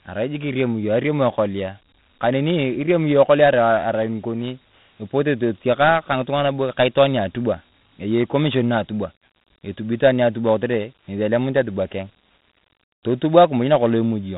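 Speech that sounds boxed-in and gritty from start to finish, with nothing above 3.9 kHz and a rough hiss riding on the voice. This is Dialogic VOX ADPCM: coarse 4-bit steps at 32 kbps, which fits 8,000 samples a second, leave plainly audible quantisation grit and a narrow telephone band.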